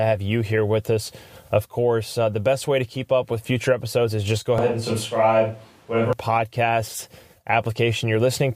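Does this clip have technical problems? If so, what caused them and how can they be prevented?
Yes. From 4.58 to 6.13 s, just after "episodes is just go", the speech suddenly turns roomy and hollow, with thinner bass. Level stays about the same. Room noise sits about 35 dB below the speech. The likely cause is a switch to a distant microphone after the close one dropped out. Monitor the close mic's feed throughout recording.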